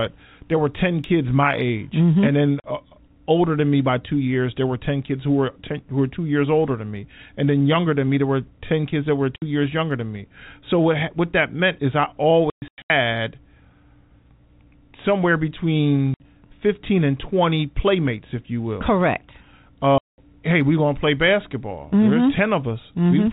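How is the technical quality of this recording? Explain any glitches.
The recording has repeated dropouts from packet loss filled with silence, heard over narrowband telephone-quality sound. Gaps fall at 2.6–2.64 s (between "and then" and "uh older than me"), 9.36–9.42 s, 12.5–12.9 s (300 ms scattered after "that meant is I", longest run 120 ms), 16.14–16.2 s, and 19.98–20.18 s (before "hey we're gonna play"). Lost packets were replaced by dead silence, in lengths that fit 20 ms packets, so the speech is cut by hard-edged holes rather than smoothed-over or repeated sound.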